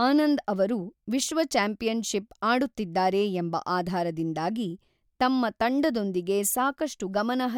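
No technical faults can be heard anywhere in the speech recording, and the signal holds steady throughout.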